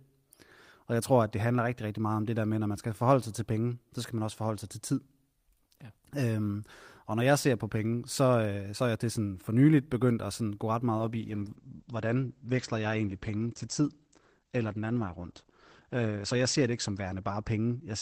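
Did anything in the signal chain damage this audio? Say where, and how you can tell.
Yes: a call bitrate drop at the codec from 10.98 s, 32 to 11 kbps. The speech turns muffled, with the band cut to 8 kHz.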